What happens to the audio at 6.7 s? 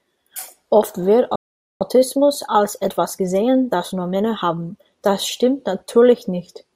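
At 6.7 s the audio is intact, with no dropout, click, distortion or other fault in the sound at that moment.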